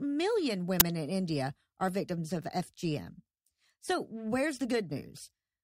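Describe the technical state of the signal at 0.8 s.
At 0.8 s, an uninitialised buffer lasting about 11 ms, which fits a 512-sample block, plays leftover memory as a loud crack rather than silence.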